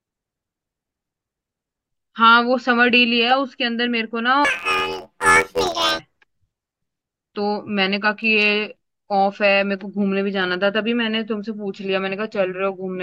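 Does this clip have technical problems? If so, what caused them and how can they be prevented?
Yes. From 4.45 to 5.99 s the speech becomes a robotic buzz at about 86 Hz. This is planar audio read as interleaved. Blocks of all-left-then-all-right samples, each 11.6 ms, are read as alternating pairs, which fits a 512-sample buffer. Declaring the sample layout at every handoff prevents it.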